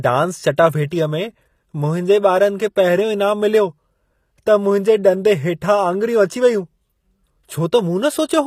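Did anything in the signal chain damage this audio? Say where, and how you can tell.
Yes. Throughout the speech the s sounds come out gritty and metallic, and the treble has nothing above 15.4 kHz. That points to the codec stage, likely HE-AAC compression at a low bitrate around 24 kbps, where spectral band replication rebuilds the top end from copied lower bands.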